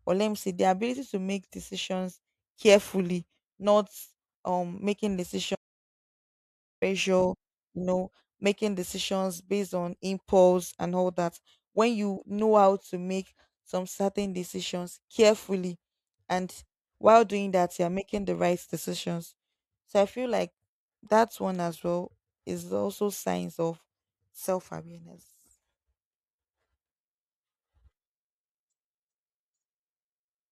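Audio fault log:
5.55–6.82 s, audio dropout to silence. Right after "carefully not um making" the speech stops dead, and about 1.27 s of silence follows. No room tone or hiss remains in the gap. The speech returns abruptly at "you know making decisions". Whatever was said in between is lost. The input was likely cut off for a moment, through a lost connection or a brief mute, while the recorder kept writing silence.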